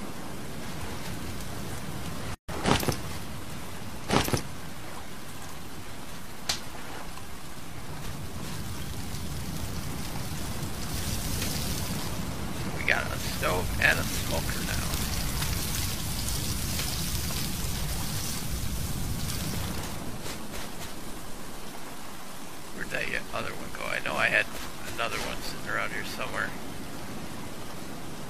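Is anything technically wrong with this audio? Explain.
Yes. There is a gap at a join of encoded pieces from 2.35 to 2.49 s. The audio was encoded in separate pieces and then joined without trimming. The encoder's start-up delay and the padding in the last frame of the earlier piece both remained at the seam, adding about 141 ms of nothing. The continuous sound drops out there, with the codec blurring the edges of the hole, so the truly silent stretch is shorter than that. The sound then resumes where it stopped.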